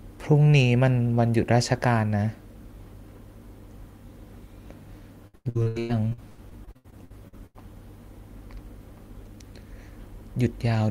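Packets were lost or arrived late over and over between 5.27 and 7.56 s of this speech clip, producing repeated packet loss (robotic sound). The receiver bridged well over a dozen holes, the longest about 96 ms, by stretching the preceding sound, so roughly 0.9 s of that stretch is synthetic fill, about 40 percent of it. The speech turns choppy there, with fragments missing between the patched pieces.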